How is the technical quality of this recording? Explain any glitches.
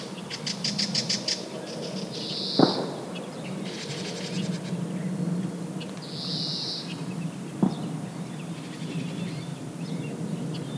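No audible glitches or faults.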